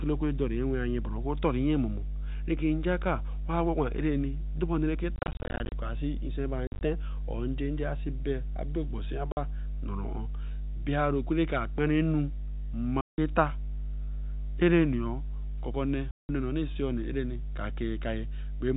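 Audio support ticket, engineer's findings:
Mains hum, 50 Hz, throughout: steady low tone with low harmonics, strong, only a few dB under the speech. Likely ground loop or nearby transformer coupling line frequency into the signal path.

Packet loss filled with silence at 5.16–5.72 s, 6.67–6.81 s, 9.32–9.37 s, 13.01–13.18 s and 16.11–16.29 s: receiver plays silence for missing packets, so the speech is chopped with hard-edged holes. Hole lengths fit 10 ms packets. First two events are scattered dropouts; the last three are solid gaps of 50 to 180 ms. Band-limited to 4 kHz by the G.711 telephone coding.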